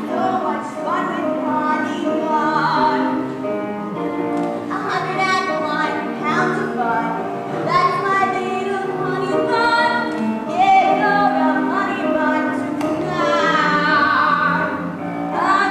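Nothing in the audio points to a technical fault at any point.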